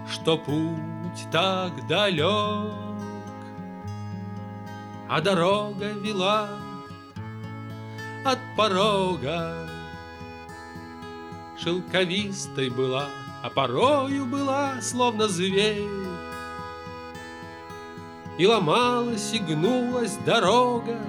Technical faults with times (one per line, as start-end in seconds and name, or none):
none